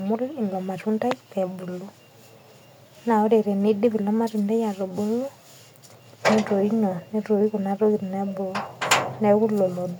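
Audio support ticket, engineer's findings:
No fault found in this speech recording. No component implicated, no further action on the audio path.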